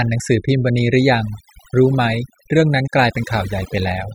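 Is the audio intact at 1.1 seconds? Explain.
No. At 1.1 seconds, as throughout the speech, the background drops and breaks up into twinkling specks. This is overdone noise removal: a noise reducer set far too aggressively. It pushes individual frequency bands down or shuts them off whenever their level sits close to its noise estimate, and the softer parts of the voice fall below that line and are removed too.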